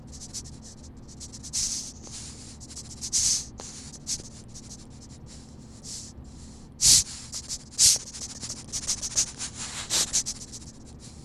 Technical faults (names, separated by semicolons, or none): loud pop